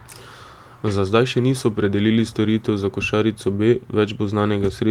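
No technical faults occur at any point in the speech.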